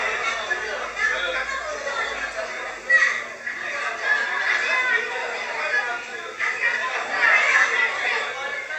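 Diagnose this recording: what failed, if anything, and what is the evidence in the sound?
Nothing failed in this recording, and the sound gives no evidence of any fault.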